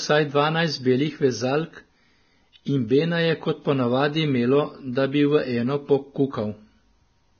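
Throughout the speech, the treble is missing above 6.5 kHz and what remains near the top sounds hissy and grainy, with consonant onsets smeared and voiced tones roughened. This is heavy Vorbis compression, likely at a low quality setting. The encoder has cut the band short and quantised the remaining high-frequency residue so coarsely that detail is replaced by noise of similar energy, which fits a bitrate of around 18 kbps.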